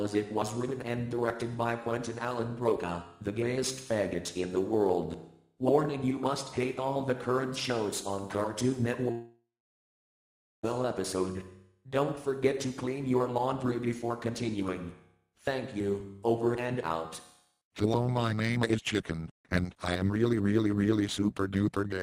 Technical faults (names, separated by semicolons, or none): long network dropout